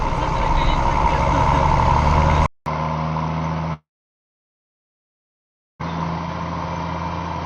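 At 2.46 s the audio falls silent for 200 ms, then returns about 10 dB quieter, dull, with nothing above 6.1 kHz and a faint new noise floor. On a spectrogram the upper band is cut off flat from there to the end, and the waveform visibly shrinks: the input likely switched to a poorer device. From 3.73 s to 5.84 s a likely long network dropout leaves a fading fill and then near-silence. It shows as a flat gap in the waveform and an empty spectrogram band, and about 1.2 s of audio never returns.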